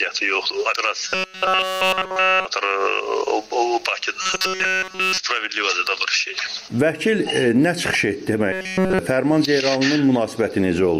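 From 1.09 to 2.45 s, 4.22 to 5.18 s and 8.52 to 8.99 s, a rigid metallic buzz at 188 Hz replaces the sound. This is robotic sound from repeated short buffers, likely 5.3 ms chunks being repeated. Unlike stutter, its pitch never varies.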